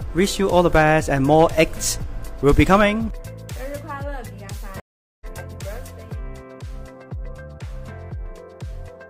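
At 4.8 s a stream reconnect cuts the audio to 0.41 s of silence, and it resumes near 5.26 s roughly a third of a second further on, a skip rather than a dropout that returns in place. From 6.2 s to the end, de-emphasis applied wrongly tilts the treble smoothly downward, about 13 dB lower at 10 kHz than at 1 kHz, a gradual muffling rather than a sharp filter cutoff.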